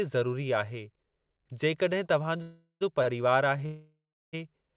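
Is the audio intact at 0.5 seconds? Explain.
Yes, the speech at 0.5 seconds is intact, with no dropout, glitch or distortion at that moment, only the narrow telephone band of the call path, which carries nothing above 4 kHz.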